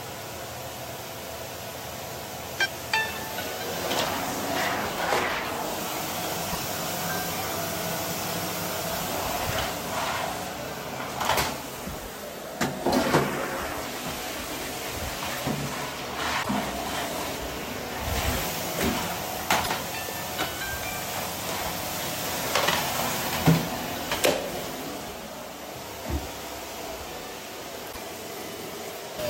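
A broken MP3 bit reservoir is the likely cause of four brief glitches in this recording of everyday sounds, at 6.52–6.58 s, 16.42–16.49 s, 19.63–19.70 s and 27.91–27.97 s, each lasting around 55 to 70 ms. At each point the audio jumps ahead and the first two or three 26.1 ms frames after the cut decode wrongly: they reach back for data stored in earlier frames that are now missing and read another frame's bytes instead.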